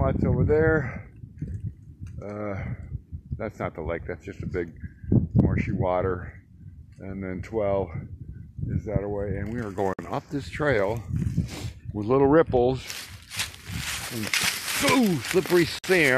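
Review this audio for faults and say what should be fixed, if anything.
Gaps at joins of encoded pieces appear at 9.93–9.99 s and 15.79–15.84 s, each about 52 ms long, cutting into continuous sound. The pieces were encoded separately and joined untrimmed, so each one's encoder start-up delay and last-frame padding remain. The sound then resumes where it stopped, with smeared edges. To prevent this, trim encoder delay and padding at every join, or encode the whole programme in one pass.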